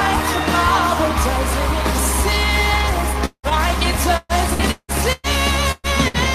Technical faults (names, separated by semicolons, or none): long network dropout; repeated packet loss (robotic sound); burst of packet loss